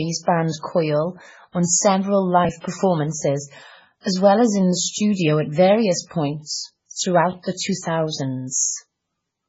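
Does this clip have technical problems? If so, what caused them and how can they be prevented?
Yes. Throughout the speech, nothing remains above 7.7 kHz, and the sound is heavily watery and swirly, with chirpy s sounds and smeared onsets. This is likely MP3 compression at a very low bitrate, around 16 kbps. Plain low-pass filtering would lose the treble without the flickering. To prevent it, encode at a much higher bitrate or keep an uncompressed master.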